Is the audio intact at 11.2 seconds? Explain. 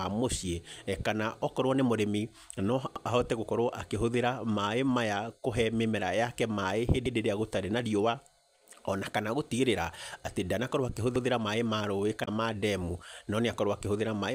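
No. Overlapping chunks disrupt the speech from 11.16 to 11.26 s, just after "atĩ ndanakorwo". A new 4-second chunk begins before the previous one has finished, so about 100 ms of audio plays twice at the join, heard as a brief stutter.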